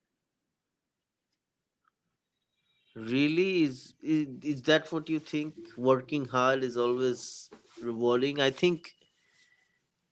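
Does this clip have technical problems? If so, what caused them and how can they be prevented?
No, the speech shows no technical problems, and the absence of content above 8 kHz is the expected band limit of a normal call path.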